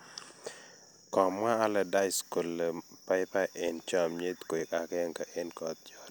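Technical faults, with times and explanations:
0.94–5.51 s, clock drift buffer slips: clicks recur every 0.91 s, likely from mismatched device clocks making the buffer drop or repeat about 15 samples.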